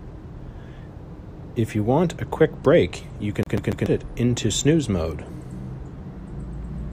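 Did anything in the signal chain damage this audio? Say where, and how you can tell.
Yes. Between 3.43 and 3.86 s, right after "a quick break you", the speech catches on itself: the same 0.14 s slice plays three times in a row, each repeat clipped off by a brief mute, giving a rapid, perfectly even stutter before the audio resumes with "it into snooze mode". That is a CD stuck on one turn, a playback-stage fault. A scratch makes the laser jump back a track at the same spot on each rotation, so it replays an identical fragment.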